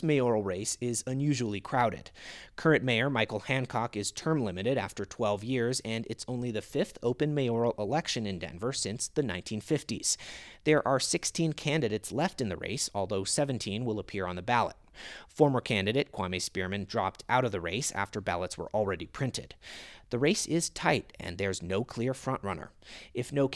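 No technical faults are audible anywhere in the recording.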